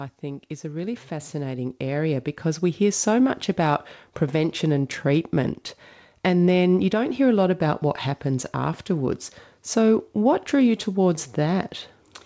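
From 0.2 to 3.11 s the speech and background swell together by about 11 dB, an automatic gain rising: the gain control judged the input too quiet and raised it gradually, levelling off before "much about prevention and". Nothing sounds above 8 kHz, consistent with a wideband call codec such as G.722.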